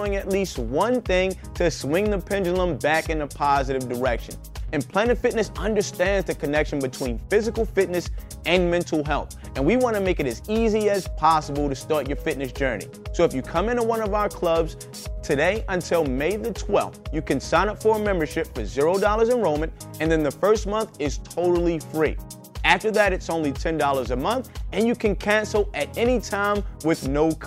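Nothing in the audio stood out as a technical fault on listening.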